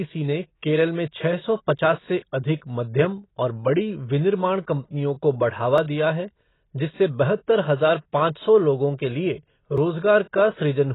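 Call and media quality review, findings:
Speech band-limited and dull, nothing above 3.9 kHz throughout, with heavy smearing and a fizzy, warbly edge on sibilants. Likely AAC compression (AAC-LC) run at a very low bitrate, something like 16 kbps. The encoder drops the highs and coarsely quantises what's left.

Tiny skips at 1.79, 5.78 and 9.78 s, evenly spaced 4 s apart, each losing well under 10 ms with the sides butted together. Likely audio missing between chunks: the recorder or processor drops a sliver each time it closes one 4 s block and opens the next.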